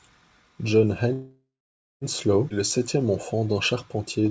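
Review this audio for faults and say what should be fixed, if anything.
From 1.13 s to 2.04 s the speech halts: the last sound is held as a fading buzz that sinks into about 540 ms of silence, and the talk then resumes exactly where it stopped, with nothing lost but 0.9 s of delay added. This call audio freeze is likely caused by packets stalling in transit, which left the jitter buffer empty, so the receiver stretched out what it last had until the audio arrived.

At 2.49 to 2.53 s the speech jumps abruptly forward, with only a tiny join between the two sides. Roughly 0.4 s of speech is gone. This is a skip ahead: the audio delayed during the earlier stall had piled up behind it, so the buffer discarded a stretch of it to bring playback back near real time. The sound on either side of the gap is spliced together almost directly.

From 2.55 s to the end at about 4.30 s the speech sounds slightly drawn out and sluggish while keeping its pitch. 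It plays at about 95 % speed, adding 99 ms in total. This jitter buffer slow-down comes from the buffer rebuilding a reserve after the skip. It repeats single pitch periods and slivers of pause many times over to stretch the audio. The call codec's band limit, with nothing above 8 kHz, is heard throughout.

To fix this, smooth the network path to avoid the stall, and let the jitter buffer absorb late audio gradually instead of emptying and then discarding a large chunk at once.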